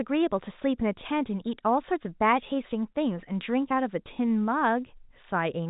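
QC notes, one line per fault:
No faults found: the speech carries the narrowband sound of G.711 telephone coding, with nothing above 3.8 kHz, which is the expected limit of a fixed-line telephone channel.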